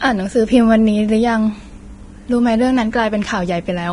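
From start to finish the speech sounds hissy and grainy, with nothing above about 10.6 kHz and blurred consonant attacks. That's likely heavy Vorbis compression, around 30 kbps, where the treble gets quantised so coarsely that fine detail turns into noise.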